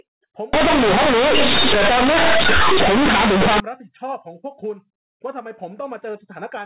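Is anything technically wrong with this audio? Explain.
Yes. From 0.53 to 3.6 s the clip has companded audio read as linear. Mu-law bytes are played as plain 8-bit samples without expansion, so every sign change swings across half the range. Quiet passages become as loud as speech, giving harsh buzzy distortion and loud noise in pauses. The waveform becomes a dense, clipped-looking block, and the spectrogram shows broadband energy smeared across all frequencies. The rest of the clip carries the mu-law telephone coding normally, with nothing above 4 kHz.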